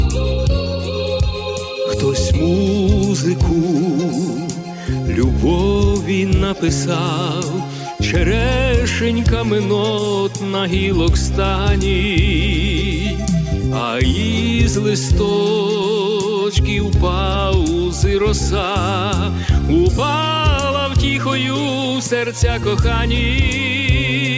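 No technical faults are audible anywhere in the recording.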